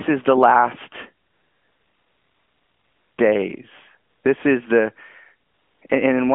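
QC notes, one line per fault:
1.26–3.18 s, 5.48–5.82 s and 5.88–5.90 s, AMR comfort noise: the background drops out and a steady, smooth hiss switches in for about 1.9 s, 0.34 s and 20 ms. The phone judged these moments silent and stopped sending speech frames, so the receiver filled them with synthetic noise that only roughly matches the real background's level and spectrum, heard through the narrowband 200 Hz to 3.4 kHz mobile line.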